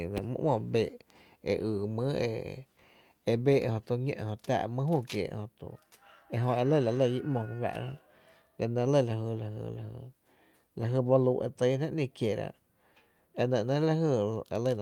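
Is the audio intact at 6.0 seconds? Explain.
Yes, at 6.0 seconds the speech plays through cleanly with no dropout, click, distortion or other fault to be heard.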